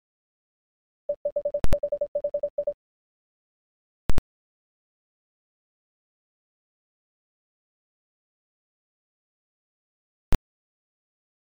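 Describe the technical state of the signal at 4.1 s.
At 4.10 s a calculation produced infinite or invalid numbers, which were clamped to the largest possible value. This is the invalid numbers at full scale fault, pinning the output flat at one extreme value, far beyond the audio's peaks, until 4.18 s. That 85 ms span fits a 4096-sample block. It sounds like a very loud pop at each edge with nothing audible between.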